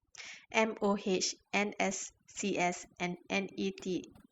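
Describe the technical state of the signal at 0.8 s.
At 0.8 s the speech carries overdone noise removal, and it runs through the whole clip rather than just this moment. A noise reduction process is working far too hard. It pulls individual frequency bands down sharply whenever they sit close to its noise estimate. Quieter parts of the speech fall below that line and vanish with the noise. The gaps between sounds drop away, dotted with twinkling specks.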